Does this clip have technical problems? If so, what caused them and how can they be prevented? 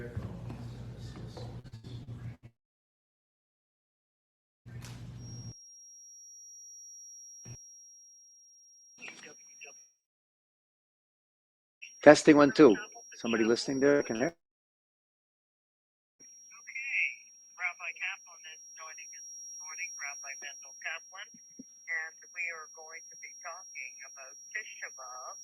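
Yes. From 1.59 to 2.45 s there is repeated packet loss (robotic sound): five gaps, the longest 77 ms, are patched by repeating the last sound, so nearly a third of the stretch is synthetic and comes out choppy with pieces missing. Unlike a single burst, the holes recur in close succession. A larger jitter buffer and a steadier network path prevent it.

Three long network dropouts follow, at 2.46 to 4.68 s, 9.78 to 11.84 s and 14.28 to 16.22 s, each about 2 s. The sound fades into a brief buzz, then near silence, and resumes later with that stretch missing. The likely cause is the connection stalling outright, which is far longer than any concealed gap. A wired or more reliable link prevents it.

A feedback whistle near 5.6 kHz sits about 20 dB under the audio from 5.14 s to the end, thin, steady and slightly wavering. It holds at one pitch instead of swelling into a howl, most likely because loudspeaker output leaks back into the microphone just at the edge of feedback. 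Headphones or echo cancellation prevent it.

A burst of packet loss at 13.90 to 14.03 s leaves about 80 ms missing. The last sound is held as a buzz or hiss that fades before the audio jumps ahead. It lasts a tenth of a second, not seconds, and so it never reaches silence. Forward error correction prevents it.

Short concealed packet loss at 14.16 to 14.23 s drops about 40 ms and is blended over, so it is heard as a quick smear or wobble, with no audible fade as in the longer burst. Redundant packet coding prevents it.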